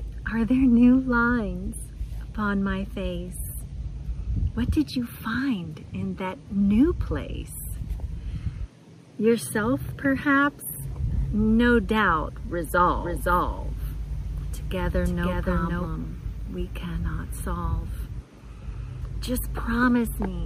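From 12.83 to 15.87 s there's a doubled audio track: a second full-band copy trails the original by about half a second at roughly the same level, dry and clean, cutting in and out abruptly. Likely a slower capture path feeding the mix twice.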